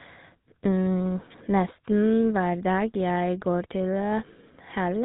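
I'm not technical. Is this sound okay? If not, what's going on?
No. GSM full-rate codec throughout: the old mobile-phone system rebuilds the speech from coarse pulses and cuts everything above 4 kHz, giving a buzzy, gravelly, muffled sound.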